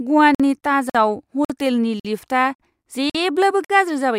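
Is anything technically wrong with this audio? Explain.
Yes. There is a gap between chunks. Silent holes of 50 ms open at 0.35, 0.90, 1.45, 2.00, 2.55, 3.10 and 3.65 s. The speech arrives in 0.5 s chunks, with silence inserted at each join. Nothing is lost, but the speech is interrupted by a short hole every 0.55 s.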